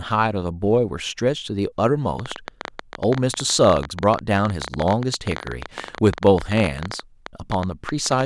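From 2.20 s to 8.22 s, a train of clicks ticks unevenly, about 14 per second, well above the speech. Interference is the likely cause.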